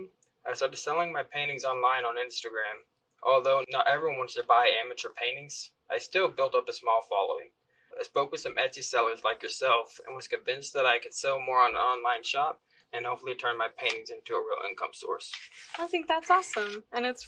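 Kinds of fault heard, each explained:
Nothing in this one stands out as a fault, so there's nothing to list.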